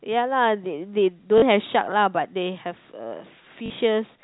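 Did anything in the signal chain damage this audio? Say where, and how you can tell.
Yes, at the network stage. Packet loss with last packet repeated occurs at 1.38–1.42 s and 3.66–3.70 s. Each 40 ms gap fits two lost 20 ms packets. The replayed packet repeats at the 50 Hz packet rate, so the run buzzes briefly, like a robotic stutter.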